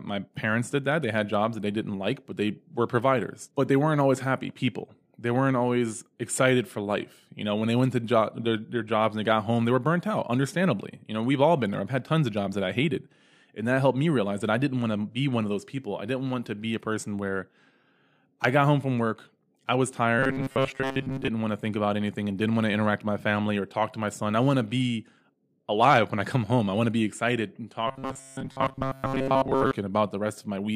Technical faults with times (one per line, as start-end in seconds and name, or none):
20.19-21.28 robotic sound from repeated short buffers
27.88-29.74 robotic sound from repeated short buffers